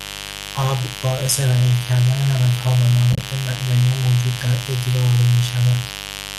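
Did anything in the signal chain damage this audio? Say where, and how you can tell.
Yes. A mains buzz sits under the speech for the whole clip. This is an analogue wiring fault, before the converter. The buzz is steady and raspy, not a smooth hum, and sits roughly 15 dB below the speech. Its fundamental is 50 Hz, with a dense ladder of harmonics climbing into the kilohertz range. A dimmer, rectifier or poor shield injects sharp spikes twice per mains cycle, and that spikiness produces the high harmonics.

The second fault is AAC frame loss with muting, at the network or decoder stage. Between 3.13 and 3.23 s the speech thins out into soft-edged gaps. About 60 ms of audio is missing across that 100 ms stretch, and the longest single dropout is around 30 ms. The short gaps point to low-delay AAC, likely AAC-ELD. The decoder zeroed the lost frames, and overlapping windows faded the sound out and back in.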